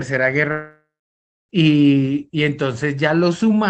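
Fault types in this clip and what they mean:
long network dropout: from 0.51 s to 1.51 s the speech breaks into a fading buzzy continuation of the last sound, then 0.61 s of near silence, and resumes with about a second missing, likely a network gap the decoder tried to conceal.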